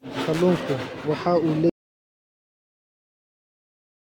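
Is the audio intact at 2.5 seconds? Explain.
No. An audio dropout to silence runs from 1.70 s to the end of the clip, likely because the input was lost while recording continued writing silence. The speech cuts off mid-flow into silence, with no room tone remaining.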